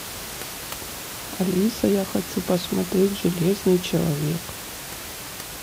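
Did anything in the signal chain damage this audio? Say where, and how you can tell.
No, nothing in the signal chain damaged this audio; the only thing heard besides the speech is the room's own background noise, sitting about 12 dB below it.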